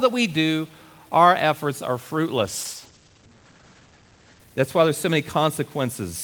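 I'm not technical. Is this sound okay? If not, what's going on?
No. Across the whole clip the speech has a distortion, and even the pauses carry a gritty noise. The likely cause is a stuck bit: one digit in every sample is frozen, so roughly half the samples come out wrong.

From 2.39 to 5.47 s, just after "do our efforts are", there is a call bitrate drop. The connection squeezed the audio into far less data, so the voice turns rough and muffled, with the top end cut away, worst for about 1.8 seconds.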